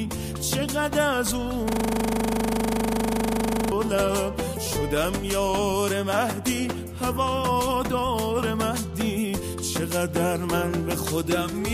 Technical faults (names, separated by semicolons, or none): system hang loop